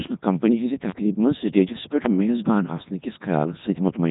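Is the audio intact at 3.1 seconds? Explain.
No. The Codec 2 vocoder affects the whole clip, including 3.1 s. At 3.2 kbit/s it rebuilds speech from sine waves, sounding buzzy, robotic, with nothing above 3.8 kHz.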